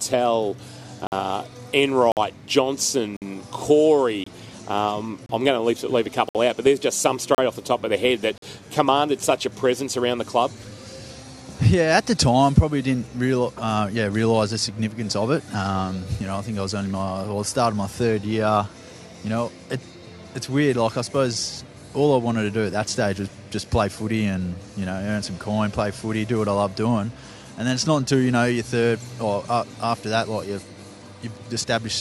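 Right from the start you get a gap between stream segments about once a second, at 1.07, 2.12, 3.17, 4.24, 5.26, 6.29, 7.35 and 8.38 s. Each is a hard-edged hole of silence lasting between roughly 24 and 58 ms. The segment timestamps don't quite butt up against each other, so the player pads the gap with silence at each one-second boundary. Nothing is actually missing. The sound just stutters and then picks up where it left off.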